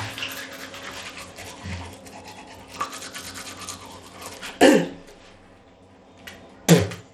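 From start to finish the sound carries plainly audible damage, likely from Bluetooth SBC compression at a starved bit pool, around 96 kbps. The treble flickers in and out with gritty grain; unlike MP3 swirl, the roughness sits in fixed wide bands, betraying SBC's crude sub-band split.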